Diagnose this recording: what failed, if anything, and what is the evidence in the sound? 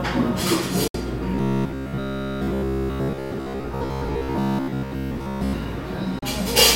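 Digital broadcast dropout at the receiver. The sound fades to silence within 3 ms at 0.88–0.95 s and 6.19–6.23 s. Corrupt frames were muted, fitting two frames, then one.

Robotic sound from repeated short buffers, at the driver or buffer stage. From 1.35 to 5.53 s a rigid 66.8 Hz buzz appears. This is likely a repeated buffer of about 15 ms replacing most of the real audio.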